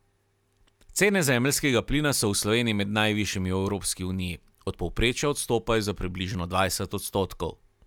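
Nothing in the speech here stands out as a technical fault; it just rolls along without a hitch the whole way.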